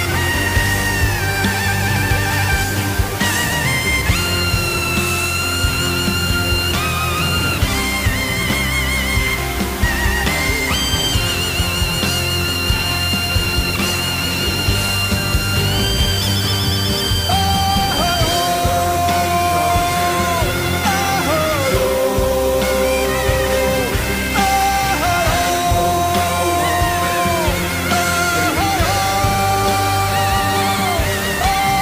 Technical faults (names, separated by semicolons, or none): low bit depth with dither